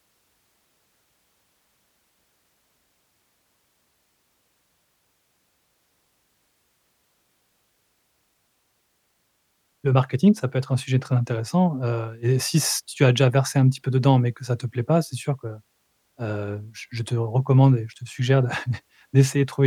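Nothing goes wrong anywhere along this stretch of speech, so there's no technical fault to point to or walk through.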